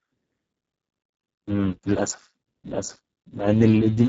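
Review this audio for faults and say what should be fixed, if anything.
Speex codec damage runs through the whole speech clip and is heavy. The voice sounds hoarse and noisy, edging toward robotic, which fits a very low bitrate near 6 kbps, where the CELP excitation gets too few bits to carry real pitch detail. On a spectrogram, harmonics look smeared and grainy, the region above 4 kHz is a diffuse noise-like wash, and everything stops at 7.5 kHz. To prevent it, encode at a higher Speex quality setting or use a modern codec such as Opus.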